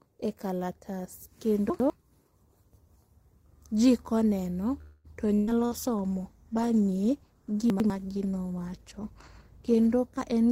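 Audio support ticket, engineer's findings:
Chunks out of order at 1.7–1.9 s and 7.7–7.9 s. A 100 ms chunk plays one chunk late, so the speech jumbles. The waveform shows hard discontinuities at the swapped joins.

Call audio freeze at 4.81–5.07 s, likely a jitter buffer underrun from delayed packets. About 227 ms of fading concealment buzz is inserted, then the speech resumes with nothing lost. The spectrogram shows smeared, decaying harmonics.

Burst of packet loss at 5.35–5.50 s (120 ms missing) and 5.65–5.74 s (60 ms missing). Concealment holds and fades the last sound, then the speech skips ahead. The spectrogram shows flat, fading bands.

Call bitrate drop at 5.63–10.03 s. The encoder goes from 32 to 15 kbps, at the floor for 4.3 s. The speech turns rough and muffled. The spectrogram shows the high-frequency band cut off.

Jitter buffer speed-up at 10.18–10.51 s. Pitch-period cuts remove about a tenth of a second, so the speech runs at 131% speed at unchanged pitch. 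The waveform shows compressed syllable spacing.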